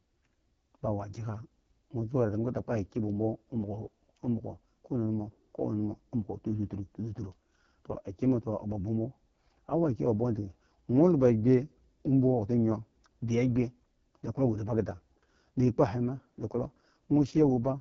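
AMR wideband (HD Voice) codec damage runs through the whole clip. The speech is modelled as pulses through a vocal tract filter, with shaped noise standing in above 6.4 kHz and nothing above 7.5 kHz. Heavy roughness and rasp point to the lowest rate, around 6.6 kbit/s.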